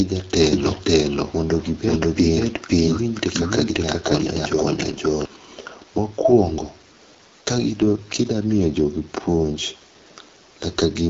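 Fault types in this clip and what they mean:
AMR wideband (HD Voice) codec: The speech runs through a wideband phone codec that models the voice with a pulse-excited vocal tract filter up to 6.4 kHz and fills the band above with shaped noise. Nothing is present above about 7.3 kHz. The damage is plainly audible throughout: voiced sounds come out rough and raspy. That degree of coarseness points to one of the lowest modes, around 8.85 kbit/s.
Doubled audio track: From 0.53 s to 5.25 s a second full-band copy of the speech runs about half a second behind the first, at roughly the same level. The copy carries no reverberant tail or room colouring, so it sounds like a discrete repeat rather than an echo. It switches in and out abruptly at those two points. The likely cause is the same signal being captured a second time through a slower path and summed with the original.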